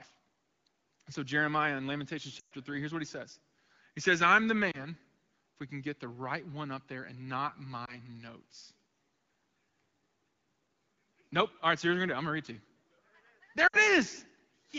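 Lost AMR speech frames break up the speech at 2.39–2.52 s, after "says I'm the" at 4.71 s, after "up there and not" at 7.85 s, and at 13.67–13.83 s. Corrupted frames are replaced by the decoder's guess, which reuses the last good pitch and vocal tract settings at falling gain. The 2.39 s gap, which fits a run of six frames, drops to near silence within two frames. The single-frame losses are only brief dips or warbles, and speech returns weak or rough for a moment each time. The lightly coded wideband sound, which fits AMR-WB at around 12.65 kbit/s, stays clear around them.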